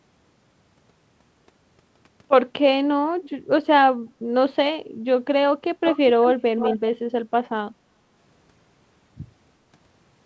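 A speech clip with two call-related problems. Delayed copies of the voice come back at 3.23–3.3 s (faint, about 205 ms behind), then 5.85–6.27 s and 6.58–6.79 s (much louder, about 347 ms behind). That's echo leak, likely a far-end loudspeaker whose echo canceller let some of its mic pickup slip back into the call. Around 4.83–4.98 s the room tone dips by about 12 dB for roughly 150 ms, which is background gated by the echo canceller clamping the mic while the speaker played. Everything sits under 8 kHz, consistent with a G.722 call path.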